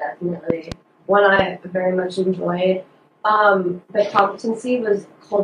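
At 0.50 to 0.74 s a loud pop arrives as a pair of sharp thumps, followed by single pops at 1.39 to 1.42 s and 4.19 to 4.21 s, the last striking hardest, roughly 20 dB above the audio. Each is most likely a voltage spike from a plug, switch or static discharge. Unlike a dropout, the sound carries on unbroken beneath each pop rather than cutting out.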